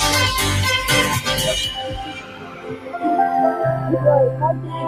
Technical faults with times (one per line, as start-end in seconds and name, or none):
0.00-4.88 noise suppressor applied to music or sounds
1.85-2.99 sound cut by the noise suppressor